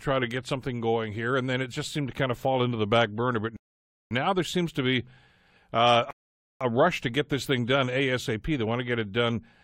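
A rebuffering stall: the player exhausted its downloaded audio and waited, inserting silent gaps at 3.57 to 4.11 s and 6.11 to 6.61 s. Speech resumes intact with "there seems to be" and "a rush to get".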